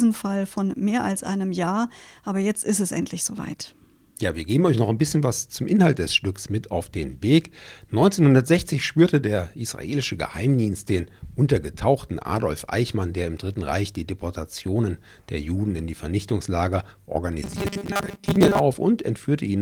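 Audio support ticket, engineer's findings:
Robotic sound from repeated short buffers, 17.42–18.60 s. Speech becomes a rigid metallic buzz at 200 Hz. Likely late-arriving audio, with a 5 ms chunk replayed to fill gaps; around half that stretch repeated, real audio skipped.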